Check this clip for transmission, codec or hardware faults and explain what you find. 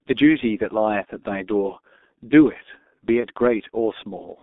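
Two faults are present: low-bitrate codec coding throughout, and one packet-loss gap near the end.

G.723.1 codec, throughout: the speech is squeezed to about 6.3 kbit/s in 30 ms frames, with a line band of roughly 250 Hz to 3.6 kHz. The slow-updating vocal model leaves the voice heavily muffled and hoarse, with smeared consonants.

VoIP packet loss concealed by the speech codec, 3.20 to 3.27 s: about 30 ms of audio went missing, which fits a single lost frame. The decoder filled it by repeating its last pitch and filter at falling gain, giving a brief buzzy or noisy smear that fades, and the voice stays weakened as later frames rebuild.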